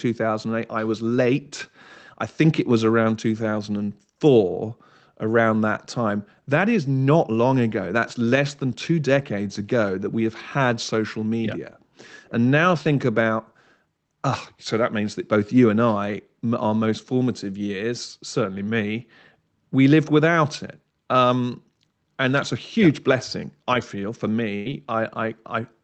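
A speech recording in which, from 24.55 to 24.68 s, the last sound is held and fades for about 99 ms and then resumes with roughly 60 ms skipped, a burst of packet loss concealed by extending the last audio. From 24.69 to 25.30 s it runs about 5% fast at unchanged pitch, a jitter buffer speed-up trimming pitch periods, around 40 ms in all, to cut the built-up delay.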